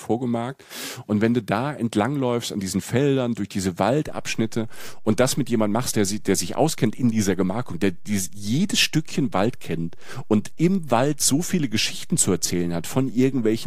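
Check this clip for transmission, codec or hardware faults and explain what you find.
One fault is present, a DC step. At 4.08 s, just after "durch diese", the waveform's zero line jumps by about -31 dBFS and stays offset to the end, as when an offset input is switched in. It is heard as a single low thump while the speech continues unchanged. The waveform shows a baseline shift, and the spectrogram shows a brief broadband low-frequency burst.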